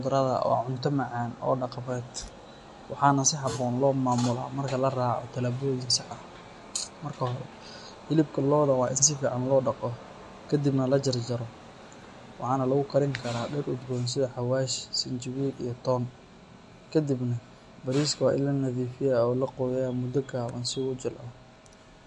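MP3 compression, likely the cause, runs through the whole clip. The speech has nothing above about 11.3 kHz, a hard treble ceiling of the kind an encoder imposes when bits run short, and the damage is plainly audible, which points to a low bitrate around 48 kbps. With so few bits, weak frequency components are dropped and return from frame to frame, giving the speech a watery, swirling texture and a dull, clipped top end.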